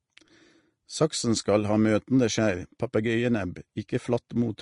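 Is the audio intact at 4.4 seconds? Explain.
No. At 4.4 seconds the speech carries the same damage heard throughout the clip, and the likely cause is Vorbis compression at a low bitrate, which fits about 36 kbps. Nothing is present above about 10.6 kHz, so the top end is cut away. The encoder spends too few bits on the treble that remains. Fine detail there is replaced by noise of similar energy. The result is plainly audible hiss and graininess, with roughened tones and softened attacks.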